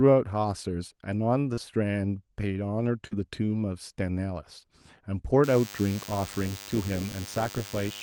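A speech recording with two kinds of fault. Short concealed packet loss occurs at 1.53 to 1.59 s and at 3.07 to 3.13 s. Each time, about 40 ms of audio failed to arrive in time, and the decoder patched the gap by extending the preceding sound before crossfading back, leaving a brief smear in the speech. From 5.43 s to the end, a DECT cordless phone buzz appears: a thin, steady 100 Hz buzz rich in harmonics, well below the speech level. It comes from a nearby DECT handset or base transmitting every 10 ms, with the audio circuitry rectifying those radio bursts.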